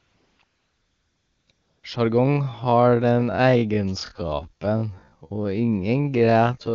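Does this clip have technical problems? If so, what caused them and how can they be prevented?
Yes. There are two problems.

AMR comfort noise fills 0.00–0.39 s, 0.43–1.47 s and 1.51–1.83 s. During these pauses the phone stopped sending speech frames, and the receiver substituted smooth synthetic noise built from a rough level-and-spectrum estimate. Unlike a dropout or noise gate, the gaps carry steady hiss rather than silence, and it switches abruptly against the real background. Turning off discontinuous transmission on the sending side prevents it.

A time-stretched section runs from 2.17 s to the end, slowed to half speed while the pitch stays put. That pitch is what separates it from a tape or sample-rate slowdown, where everything would drop an octave. The pace drags as short pieces repeat, likely from software stretching the audio to fill a set length. Trimming or padding with real audio instead of stretching prevents it.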